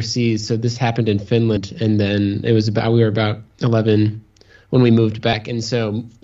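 At 1.56 s and 2.78 s, compressed frames are skipped, jumping roughly 150 ms then 100 ms ahead, which fits whole 26 ms frames.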